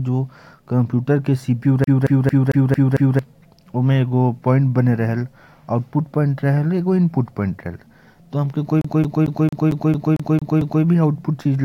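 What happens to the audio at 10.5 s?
An even stutter repeats 0.23 s of speech nine times from 8.81 to 10.84 s: a CD stuck on one turn, skipping back every rotation.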